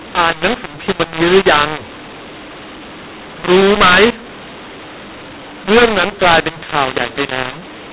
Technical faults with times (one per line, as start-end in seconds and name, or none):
0.00-7.92 mu-law and A-law mixed up